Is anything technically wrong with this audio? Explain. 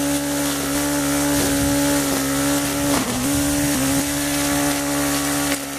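Yes: chunks out of order at 0.75–1.25 s and 3.25–4.0 s. A 250 ms chunk arrives late by one, then two, chunks, so audio plays in jumbled order with three hard joins, each visible as a vertical spectrogram line and a waveform step.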